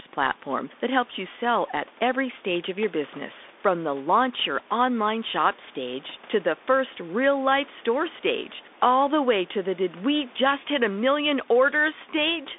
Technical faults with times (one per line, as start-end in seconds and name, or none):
0.00-12.59 Bluetooth CVSD headset codec